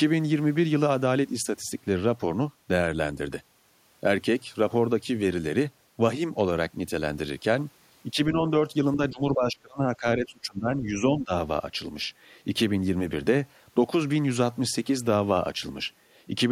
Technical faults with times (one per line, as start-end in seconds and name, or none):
8.13-8.42 speech suppressed in double talk
8.96-11.32 speech suppressed in double talk